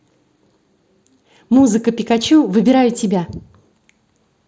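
No technical faults can be heard in this speech; it arrives through what sounds like a wideband Bluetooth mSBC headset link, whose light coding character stays consistent throughout.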